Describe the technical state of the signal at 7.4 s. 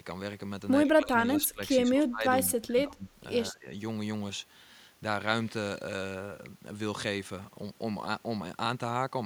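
At 7.4 s the speech signal is intact, with no audible fault at that moment.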